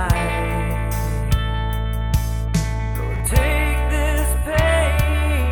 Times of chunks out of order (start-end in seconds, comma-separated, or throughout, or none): 3.16-3.20